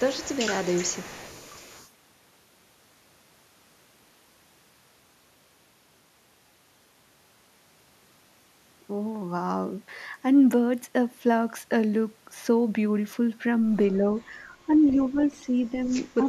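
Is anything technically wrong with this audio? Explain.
Yes, the speech carries two echo-canceller faults.

Echo leak appears from 0.0 to 1.9 s, and briefly at 14.74–14.78 s and 15.84–15.93 s. A faint copy of the speech trails it by 192 ms, roughly 20 to 25 dB down, likely residual loudspeaker pickup that the far end's canceller failed to remove.

Speech suppressed in double talk occurs at 14.27–14.69 s, 14.95–15.53 s, 15.70–15.74 s and 16.16–16.24 s. The level dips by roughly 10 dB, once by about 5 dB and at the last point by about 20 dB. This is likely the canceller ducking the talker while both sides speak at once.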